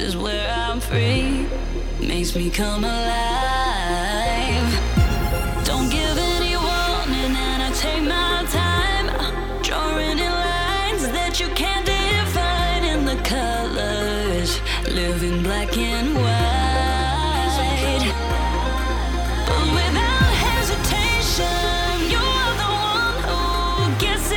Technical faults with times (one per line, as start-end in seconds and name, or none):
none